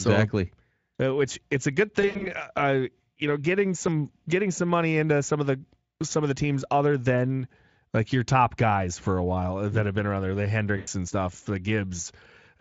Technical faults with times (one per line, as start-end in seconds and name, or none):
2.01-2.30 VoIP packet loss concealed by the speech codec
3.88 dropped buffer (overrun)
10.77-10.88 VoIP packet loss concealed by the speech codec
11.08 dropped buffer (overrun)